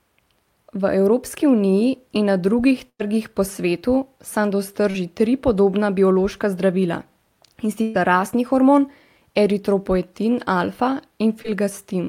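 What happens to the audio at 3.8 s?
Right around there, from about 3.79 to 3.83 s, there's a short concealed packet loss. Roughly 20 ms of the call didn't arrive at the decoder in time, so the receiver patched the gap by extending the sound that came just before it, about 14 ms of made-up continuation, and then crossfaded back into the real signal. What you get is a quick smear or wobble in the speech.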